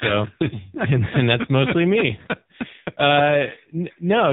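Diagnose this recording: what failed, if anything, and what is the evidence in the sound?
The failure is at the codec stage: the speech went through the AMR narrowband mobile codec at a low rate, and the heavy buzzy, synthetic quality fits a mode around 5.9 kbps. Throughout, nothing above 4 kHz survives, and the voice sounds rebuilt from a vocal-tract model with sparse pulse excitation.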